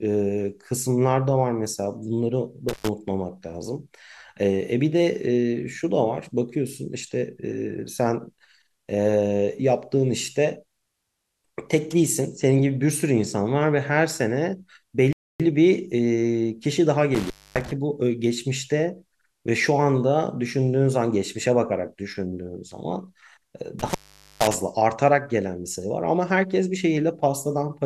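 At 2.69 s the speech drops out in an intermittent contact fault, with the line open for about 110 ms. A loose plug or cable briefly breaks the connection, so the signal vanishes with a crackle at each edge and only faint hiss remains. On a waveform this shows as sharp spikes around a flat gap. A spectrogram shows broadband vertical streaks at the edges with a thin noise floor between them.

At 15.13 s the speech stops mid-flow for 271 ms, a playback stall, and then carries on. The likely cause is a player starved of data or with a blocked thread, so the output simply goes silent until it recovers. The waveform is cut off cleanly to silence with no clicks. The spectrogram shows an empty column with no edge streaks, unlike the contact faults.

The contact fault returns at 17.15 s, open for about 258 ms, and again at 23.79 s, open for about 461 ms. Each time there are crackling edges around a hiss-filled gap, and the gap gets longer with each event.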